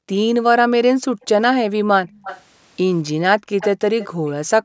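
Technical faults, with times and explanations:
0.00–0.09 s, 1.08–1.23 s, 1.74–1.80 s, 2.04–2.22 s and 4.13–4.25 s, background gated by the echo canceller: the canceller clamped the microphone while the far end played, so the room sound dips about 40 dB (about 22 dB at 2.04 s) before returning.
2.22–2.42 s, 3.59–3.68 s and 3.99–4.08 s, echo leak: a delayed copy of the speech arrives 275 ms late, roughly 10 to 20 dB below the speech, likely loudspeaker sound that the far end's canceller failed to remove.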